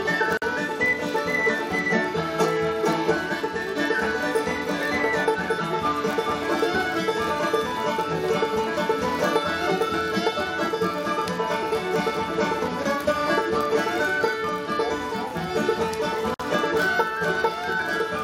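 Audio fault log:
throughout: block size mismatch (padded). A buzz at 43.1 Hz runs under the whole clip, because each block handed on is a touch shorter than the 1024 samples the next stage reads, and the shortfall is filled with zeros. That tiny dropout repeats once per block, which fits 1024-sample blocks at 44.1 kHz. Playback is slowed by a factor of 0.999, too little to hear as a tempo change, and pitch stays essentially normal.
0.37 to 0.42 s and 16.34 to 16.40 s: gap at a join of encoded pieces. Continuous sound drops out for 47 ms and then 54 ms, and the edges of each hole are blurred. At each point, separately encoded sections were butted together without trimming the encoder's start-up delay and the padding of the last frame, so that silence stays in. Afterward the sound resumes exactly where it broke off.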